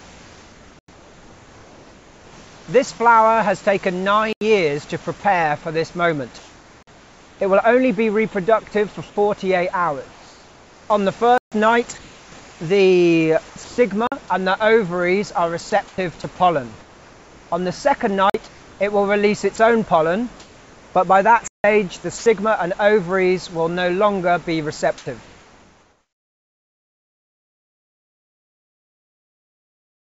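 The sender's voice detector likely switched on and off repeatedly from 0.0 to 3.0 s, 5.04 to 7.4 s, 9.1 to 14.3 s and 15.7 to 22.26 s. It swapped quieter sound for comfort noise, so the audio is chopped by the voice detector.

Blocks of digital silence replaced the audio at 0.79 s (about 93 ms, which fits a 4096-sample buffer), 4.33 s (84 ms), 6.83 s (46 ms), 11.38 s (139 ms), 14.07 s (46 ms), 18.3 s (46 ms) and 21.48 s (165 ms). This points to an output buffer left unfilled, and each block is heard as an abrupt hole.

At 24.98 s the detector likely dropped 70 ms of sound, leaving a brief patch of steady noise. All of this is heard through a G.722 call path with nothing above 8 kHz.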